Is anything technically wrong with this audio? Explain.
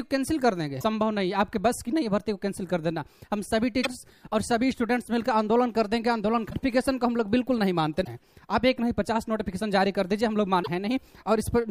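Yes. The audio has damaged data in a compressed stream, occurring five times: at 0.77 to 0.84 s, 3.80 to 3.86 s, 6.47 to 6.54 s, 8.01 to 8.08 s, and 10.59 to 10.68 s. Each lasts roughly 60 to 80 ms. At these points the encoded data is corrupt. The decoder misreads those frames, loses sync and hunts for the next valid frame header. Each one is heard as a brief chirp, squawk or blip.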